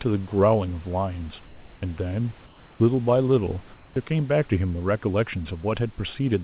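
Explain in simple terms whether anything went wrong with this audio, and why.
Twice, in short pauses in the speech, from 1.46 to 1.82 s and from 3.74 to 3.96 s, the natural room background gives way to a flat, featureless hiss that is slightly quieter. This is comfort noise in place of the background. The call likely stopped sending sound when it detected no speech, and the receiving end filled each gap with made-up noise shaped to resemble the room, until the speech resumed.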